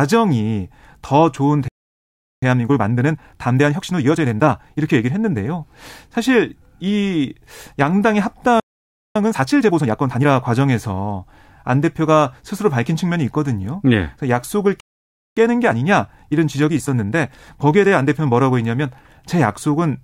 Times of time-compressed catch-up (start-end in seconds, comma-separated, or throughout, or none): 2.43-5.39, 9.16-10.26, 15.37-18.37